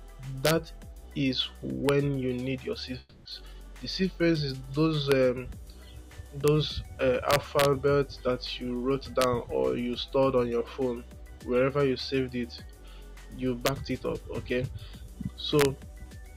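At 0.45 to 0.51 s and again at 1.89 s there are violent cracks on loud peaks, the first of the integer overflow faults. A sum or gain exceeded the largest integer value and wrapped to the opposite sign instead of being limited, so each peak over the limit flips across the full range. The result is much sharper and harsher than ordinary clipping, even though the peaks are only pushed about 0 to 2 dB over full scale.

From 2.99 to 3.27 s the sound is replaced by a fading buzz-like continuation of the last sound, lasting about 260 ms without dropping to silence, and then the audio resumes further on. The missing 260 ms is never heard. This is likely a long network dropout, with the receiver concealing the gap by extending what it last had.

The integer overflow cracks return at 5.12 s, 6.48 s, 7.31 to 7.65 s (about 2 dB over), 9.22 to 9.24 s, 13.66 to 13.69 s and 15.59 to 15.65 s. Each is an abrupt snap wherever the loudest peaks wrap around.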